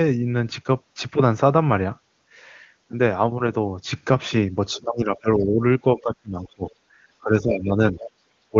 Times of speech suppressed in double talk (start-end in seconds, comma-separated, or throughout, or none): 4.73-5.61, 5.96-6.64, 7.23-7.96, 8.51-8.56